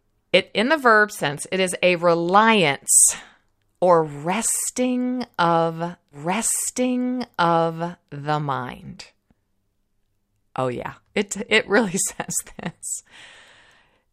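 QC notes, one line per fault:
6.11–8.11 s, stream segment repeated: right after "or resting of", about two seconds of the speech plays a second time before continuing into "the mind", so the clip runs two seconds longer than the original. A small blip marks the jump back, where the audio is cut off mid-flow and restarts at an earlier point. It sounds like the player fetched or queued the same chunk of the stream twice and played both copies back to back.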